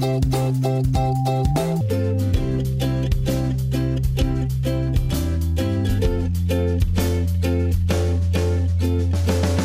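From 0 to 1.81 s, the samples are clocked out faster than they were captured, with no rate conversion, a wrong sample rate fault. Everything runs 1.5 times too fast and the pitch rises about 7 semitones together, so the opening sounds high, squeezed and hurried. That ratio fits audio recorded at 32 kHz being played back at 48 kHz.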